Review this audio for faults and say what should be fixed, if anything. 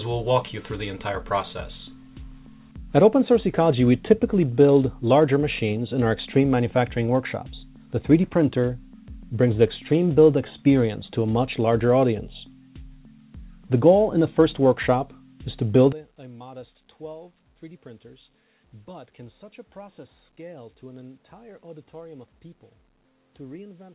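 From 15.93 s to the end at 23.95 s, the level drops by about 21 dB and the centred content thins to a faint residue, with the audio already band-limited below 4 kHz by the call codec. The likely cause is one channel inverted, so that summing to mono cancels everything common to both channels and leaves only their difference. To prevent it, check channel polarity in the stereo chain and confirm mono compatibility before the downmix.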